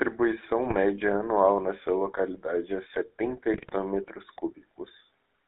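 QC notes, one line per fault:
throughout: GSM full-rate codec. The speech has a buzzy, gravelly roughness from pulse-driven vocal-tract coding, confined to 300 Hz to 3.7 kHz, a steady texture rather than bursts.
0.66–0.76 s and 3.54–3.74 s: GSM bit errors. Sudden squawks, pops and gargling, with level jumps, as corrupted filter, pitch and gain values wreck a few frames, the second burst roughly twice as long.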